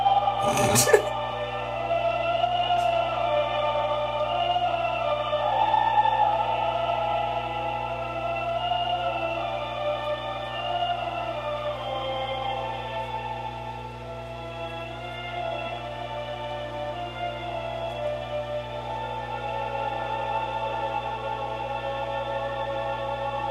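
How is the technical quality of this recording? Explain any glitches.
The recording has one clear problem: mains hum running the whole way through. It's a steady low tone sitting at 60 Hz, with a few low harmonics stacked above it, and it's fairly loud, only around 15 dB under the sound itself. That usually means a ground loop or a transformer close to the cabling, letting the power line's 60 Hz cycle leak into the signal path.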